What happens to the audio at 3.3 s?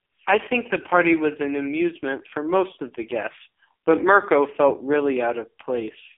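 At 3.3 s, as through the whole clip, the speech carries AMR narrowband mobile codec damage: nothing above 3.7 kHz, heavily buzzy and synthetic, which fits a low mode around 5 kbps.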